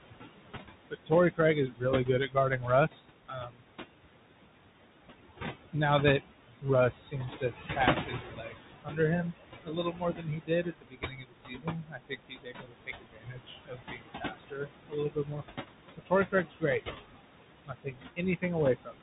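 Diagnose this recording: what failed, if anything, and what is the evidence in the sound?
Call processing: noise suppressor artifacts run the whole way. The room noise, about 9 dB under the speech, gets pulled down about 20 dB between words.

Codec stage: the Bluetooth CVSD headset codec is plainly audible. It's 64 kbps one-bit delta modulation, so nothing above 4 kHz survives, s sounds go scratchy, and granular hiss rides underneath.

Same suppressor, different failure: speech cut by the noise suppressor at 0.9–3.63, 6.61–8.99 (just after "now that"), 9.64–15.44, 15.97–16.64, 17.66–18.44 and 18.85–19.02 s. Speech gets mistaken for noise and ducked about 19–22 dB. The 9.64–15.44 stretch is the worst, with roughly four seconds swallowed.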